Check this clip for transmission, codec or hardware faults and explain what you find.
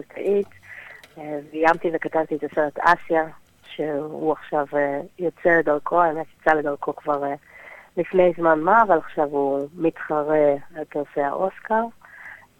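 No transmission, codec or hardware faults were found.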